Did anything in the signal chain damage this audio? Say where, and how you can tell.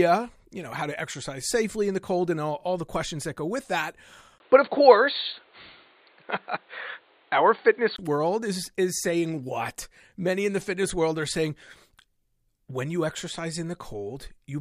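Yes. From 4.38 s to 7.98 s, after "that go with that", a 20 ms gap precedes a dull, boxy stretch with nothing above 4.5 kHz, a level shift of around 5 dB and a new noise floor roughly 35 dB down, until "world is is saying". The likely cause is the input switched to a poorer device at the driver stage.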